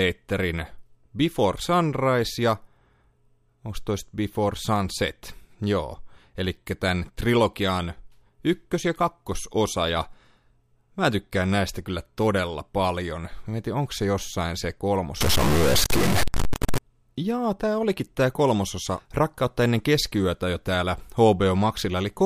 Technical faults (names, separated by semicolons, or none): stuck bit